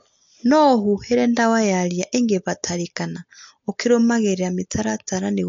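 From start to finish the speech has a hard ceiling at 7.2 kHz with nothing above it, plus a watery, swirly texture around the s sounds. That's likely MP3 compression, starved for bits in a way that points to roughly 48 kbps, so weak frequency lines keep dropping in and out.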